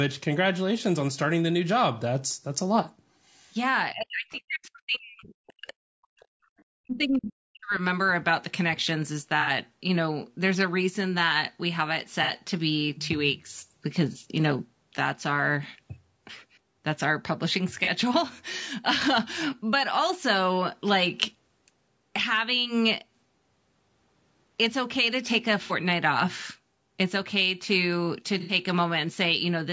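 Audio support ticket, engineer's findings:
Encoder running a low-delay AAC path, likely AAC-ELD at around 32 kbps, across the whole clip. Short transform frames resolve the speech harmonics poorly at this rate. Symptom: plainly audible codec damage throughout, with rough, grainy speech, noise filling the gaps between harmonics, and a synthetic-sounding top band within the 8 kHz ceiling of the call path.

Echo canceller misjudging double talk, treating near-end speech as echo and attenuating it. Likely cause of gain dips reaching about 40 dB at 3.92–5.81 s, 6.02–6.27 s and 6.72–7.81 s. Symptom: talker sinks, thins or drops out in pieces while the far side is active, roughly three seconds affected in total.

Residual echo not fully cancelled, so the far-end voice played on the talker's loudspeaker reaches the mic. Likely source of brief leaked fragments at 4.31–4.38 s (about 30 dB under the talker) and 6.58–6.64 s (about 35 dB under). 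Symptom: faint scraps of a second voice, the first overlapping a double-talk suppression window.

Packet loss on the AAC stream, with the decoder concealing by extending the last good spectrum. Symptom: smeared, noisy or phasey patches at 9.41 s (60 ms), 12.23 s (60 ms), 14.12 s (30 ms), 17.84 s (30 ms), 25.64 s (60 ms) and 28.40 s (90 ms). The durations point to one to three lost frames of about 30 ms each per event, consistent with AAC frame loss with concealment.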